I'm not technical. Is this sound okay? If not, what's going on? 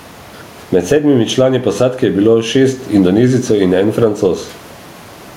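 No. There is gain pumping throughout the speech. The level keeps jumping up and down, likely from a limiter fighting overly high microphone gain.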